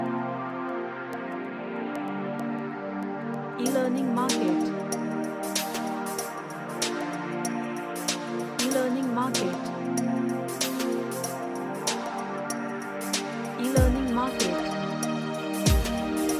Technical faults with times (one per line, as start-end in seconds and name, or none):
none